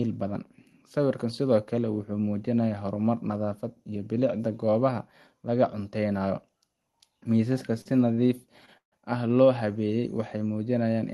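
Starting at 7.81 s, the speech hits three short stalls from late packets: 7.81 to 7.87 s, 8.13 to 8.20 s, and 8.66 to 8.69 s. Each time a packet missed its slot, the jitter buffer emptied and the receiver held the last sound until the packet turned up. That adds 40 ms, 44 ms and 17 ms of stretched sound, heard as a drawn-out sound with a slight buzz or dip before the speech picks up exactly where it left off.

From 8.77 to 8.99 s comes a longer call audio freeze, likely caused by packets being held up in transit. The buffer ran dry and the receiver extended the last sound for about 144 ms as a fading buzz or hiss, with roughly 120 ms of near-silence in the gap. When the delayed packets arrived, the speech resumed from the point where it stopped, so the passage is delayed rather than cut.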